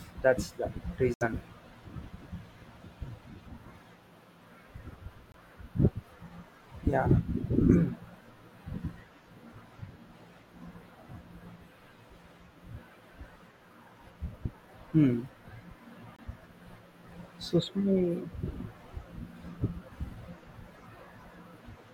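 Corrupt frame muted at 1.14 to 1.23 s, 5.32 to 5.36 s and 16.16 to 16.20 s: damaged compressed speech frames were rejected by the decoder and replaced with silence, leaving abrupt gaps without shifting the timing.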